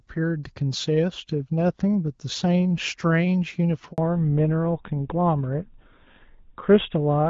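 At 3.92 s the speech drops to silence for 60 ms. This is a handover gap: no speech frames arrived while the call moved between networks. From 3.98 s to the end the voice sounds duller and rougher, with nothing above 4 kHz. That is a fallback to narrowband, which fits a switch from HD Voice to a GSM full-rate codec.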